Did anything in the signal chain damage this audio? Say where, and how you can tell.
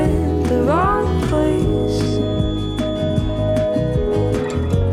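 Yes. From 1.05 s to the end at 4.93 s, a feedback whistle sits behind the sound: a thin, steady tone at 3.4 kHz, well below the main signal, wavering slowly in level without growing. The likely cause is acoustic: loudspeaker output reaching the microphone with loop gain just under the point of runaway, so that one frequency keeps ringing. A spectrogram shows a single narrow horizontal line at 3.4 kHz starting at 1.05 s.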